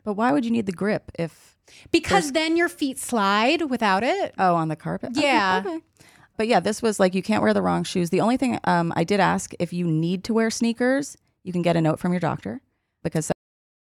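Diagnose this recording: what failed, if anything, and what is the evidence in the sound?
The final buffers of the recording were never written to storage, producing a cut-off end. The speech stops abruptly mid-sound at 13.32 s and falls straight to digital silence with no natural decay, leaving about half a second of dead air before the file ends.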